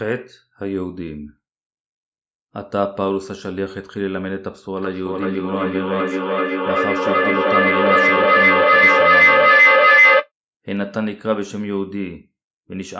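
Speech, and from 4.77 to 10.31 s there's feedback echo between two devices. One device's speaker feeds the other's microphone, so the sound comes round roughly every 400 ms, thinner and ringier each time, and piles up to about 11 dB over the speech.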